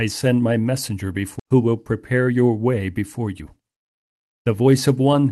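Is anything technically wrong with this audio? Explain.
Yes, there is a skip ahead and two jitter buffer speed-ups.

Skip ahead at 1.39 to 1.41 s, right after "send my messenger": about a second of speech is dropped and the two sides are spliced directly, with no gap.

Jitter buffer speed-up from 1.53 to 2.50 s (108% speed, roughly 0.1 s removed) and from 2.98 to 5.23 s (114%, roughly 0.3 s removed): the buffer held excess audio and shed it by cutting repeated pitch-period-length pieces, so the speech sounds hurried at unchanged pitch.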